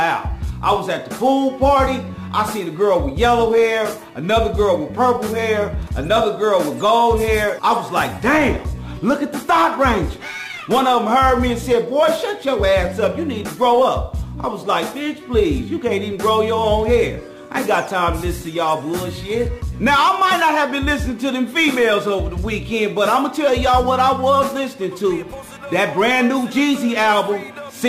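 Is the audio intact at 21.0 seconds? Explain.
No. At 21.0 seconds, as throughout the clip, the audio carries a gritty, inharmonic fizz that rises with loud and high-frequency passages, sitting roughly 30 dB below the signal. This is crude rate conversion: the sample rate was changed by simply repeating the nearest sample rather than filtering, which fits a 44.1 kHz to 48 kHz conversion. The repeating timing error creates shifted, inharmonic copies of the underlying sound.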